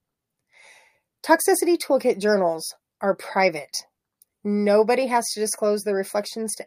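Listening closely to the speech, nothing stood out as a technical fault at any point.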